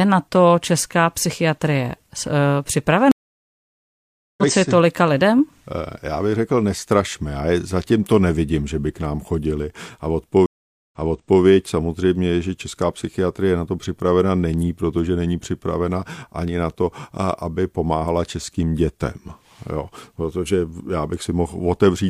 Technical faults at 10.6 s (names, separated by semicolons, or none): stream reconnect